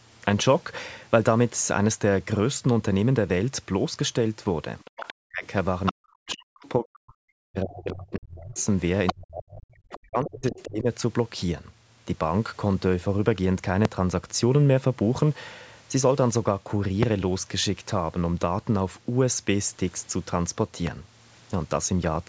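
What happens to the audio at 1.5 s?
Nothing goes wrong at 1.5 s; the speech there is intact, with only the ordinary call microphone processing on it.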